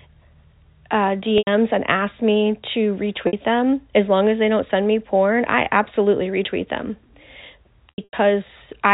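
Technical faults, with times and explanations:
1.38–1.47 s, packet loss with pitch repetition: about 90 ms of audio drops out just before "and asks me to", which fits three lost 30 ms packets. The receiver repeats the last pitch period to fill the gap, so the sound briefly holds on a buzzy, frozen tone before fading.
3.27–3.33 s, packet loss with pitch repetition: a 60 ms gap between "and asks me to" and "them as long as" is bridged by the repeated pitch cycle. This short loss sounds like a slight hold or buzz rather than a silence.
7.89–8.13 s, packet loss with pitch repetition: 180 ms of audio is lost in bursts scattered over 240 ms, with the longest run 90 ms. The repeated pitch periods fade out over about 50 ms, so the sound stutters between buzzy holds and near-silence before cross-fading back.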